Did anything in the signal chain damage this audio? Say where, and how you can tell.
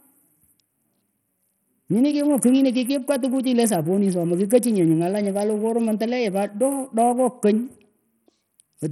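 Yes, at the codec stage, throughout the speech. Nothing remains above 14.6 kHz, the upper range flickers, and a gritty quantisation noise with aliasing rides on it. This is likely Bluetooth SBC compression starved of bits, fitting roughly 64 kbps, leaving the top sub-bands empty.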